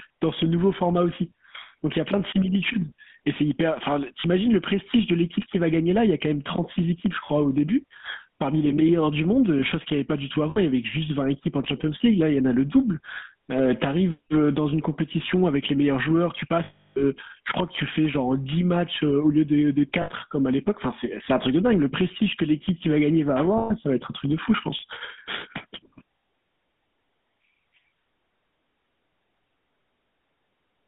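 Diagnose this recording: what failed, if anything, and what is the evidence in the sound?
Gain pumping runs through the whole clip, an analogue input stage problem. The background swells by roughly 10 dB in the pauses and drops under each loud syllable, squashing the dynamics. The likely cause is excessive input gain driving a fast limiter or compressor.

GSM full-rate codec damage is plainly audible from start to finish, at the codec stage. The speech has a buzzy, gravelly roughness and sits in a band of about 200 Hz to 3.5 kHz, which fits a 13 kbps full-rate stream. The pulse-excited vocal-tract model discards fine detail.

Lost GSM frames are network or transmission faults, heard at 4.20 s (40 ms), 10.50 s (60 ms), 16.64 s (320 ms), 20.02 s (60 ms) and 23.58 s (120 ms). Each gap is held as a rough, metallic ring repeating the last good frame.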